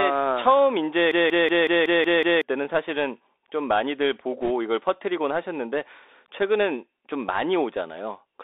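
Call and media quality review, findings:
Bluetooth CVSD headset codec, entire clip: narrowband, dull speech with scratchy s sounds and a granular hiss under it. Probable component: headset link on CVSD, a 1-bit delta coder at 64 kbit/s whose adaptive step lags fast loud highs. Spectrogram: energy confined to roughly 300 Hz–3.7 kHz, empty above, with a grainy noise floor across the band.

System hang loop, 1.12–2.42 s: machine-gun stutter, one 186 ms segment repeated 7 times at 5.4 Hz. About a second and a half of real audio is missing. Mechanism: host or driver froze while the hardware kept replaying the same ring buffer, which fits an 8192-sample buffer. Waveform: identical blocks tiled end to end. Spectrogram: vertical seams every 186 ms.

Bit errors on a Bluetooth voice link, 4.42–4.51 s: short burst of rushing crackle over the speech, with no sharp clicks. Mechanism: flipped bits on the CVSD link at an error rate of a few percent. 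Each bit moves the signal only one small step and the decoder leaks the error away. Waveform: fuzzy, noisy envelope with no spikes. Spectrogram: broadband speckle across the 3.7 kHz band.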